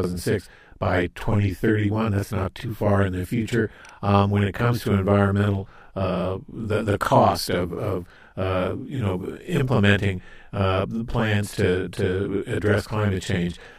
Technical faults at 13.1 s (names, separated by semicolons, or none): channel delay (doubling)